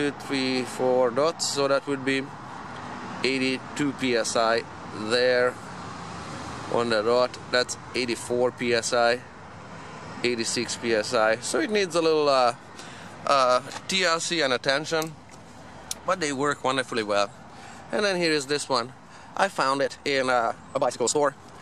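At 19.70 s, software likely compressed the final stretch of audio to fit a shorter slot, running it at about 1.81 times its original pace while holding pitch steady by discarding short slices of the waveform. This time-stretched section runs from 19.70 s to 21.62 s, where the clip ends. The tempo lurches forward abruptly with no change in pitch, and the missing slices leave the sound rushed.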